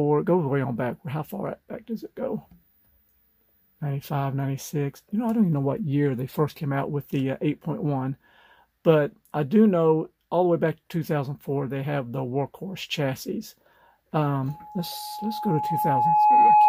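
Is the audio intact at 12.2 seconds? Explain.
Yes, the audio is intact at 12.2 seconds, with no dropout, click, distortion or other fault audible at that moment.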